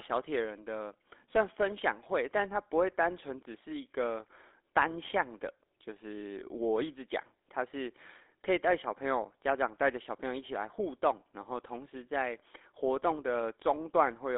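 Throughout, GSM full-rate coding limits the speech to a telephone band of roughly 300 Hz to 3.6 kHz, and the coarse pulse excitation adds a plainly buzzy, gravelly roughness.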